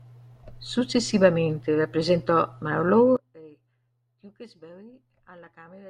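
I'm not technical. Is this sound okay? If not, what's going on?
No. From 3.17 s to the end, the speech suddenly sinks to a faint trace. This is likely one channel inverted, not a dropout, because a faint copy remains rather than silence.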